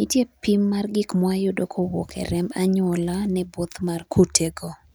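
Nothing technically wrong turns up anywhere in this short speech recording.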